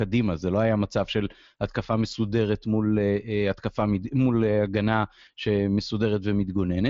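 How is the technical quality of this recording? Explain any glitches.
No glitches are audible: the speech carries the band-limit of a Bluetooth mSBC headset link, with nothing above about 7.8 kHz, and no faults beyond that.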